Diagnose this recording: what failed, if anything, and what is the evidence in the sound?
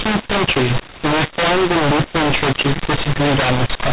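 The codec stage failed: mu-law and A-law mixed up. The speech was coded as G.711 mu-law but decoded as A-law. Sample levels come out scrambled throughout, so the speech is harsh and distorted. Quiet samples are lifted, filling pauses with noise.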